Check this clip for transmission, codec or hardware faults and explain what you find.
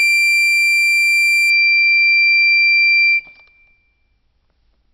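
One fault, imaging from linear upsampling, from 0.0 to 1.5 s: straight-line interpolation, which fits a 12 kHz source raised to 48 kHz, leaves a mirrored spectrum from 6 to 12 kHz roughly 20 dB down, heard as faint metallic shimmer above a dulled top end. Unlike aliasing, it adds nothing below 6 kHz.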